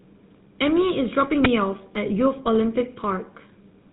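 Throughout the speech, the sound is buzzy and gravelly, with a hard edge and nothing above 4 kHz, which fits the GSM full-rate codec at about 13 kbit/s. It models the vocal tract and excites it with sparse, regularly spaced pulses, leaving audible roughness.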